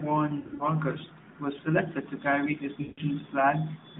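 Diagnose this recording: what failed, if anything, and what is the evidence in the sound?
Lost AMR speech frames on the radio link. Brief warbles at 0.40 to 0.67 s. After "selected to carry his", a smeared fade from 2.82 to 3.01 s. The decoder replayed old parameters at falling gain.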